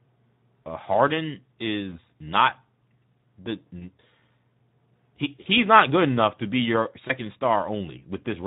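From start to finish the speech carries plainly audible Speex codec damage, which fits a bitrate of around 11 kbps. Too few bits reach the excitation, so the voice sounds hoarse and grainy, unlike the swirly, watery smearing of a transform codec.

Four brief events come from VoIP packet loss concealed by the speech codec, at 1.89 to 1.96 s, at 3.79 to 3.87 s, at 5.44 to 5.47 s just before "not good enough to", and at 7.07 to 7.14 s just after "enough to be your". Each one points to about 20 ms of lost audio. The decoder filled the gap by stretching its last pitch and filter into a fading tone or coloured noise, and the voice stays weak or distorted just afterward. That fill, rather than a clean silent gap, distinguishes it from a plain dropout.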